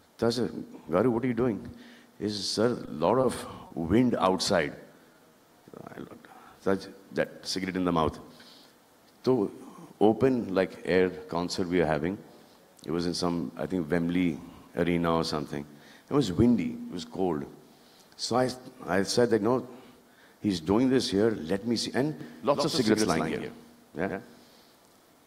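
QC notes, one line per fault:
2.85–2.89 s, 3.21–3.25 s, 3.67–3.72 s: short stall from a late packet. The jitter buffer ran dry, so sound is held 20, 20, then 30 ms before resuming.
4.93–5.32 s: jitter buffer slow-down. Repeated pitch periods add about 49 ms, so audio runs at 90% speed, drawn out at unchanged pitch.
22.21 s to end: doubled audio track. A full-band copy about 5 dB down trails by roughly a tenth of a second, starting abruptly, likely from a second, slower capture path.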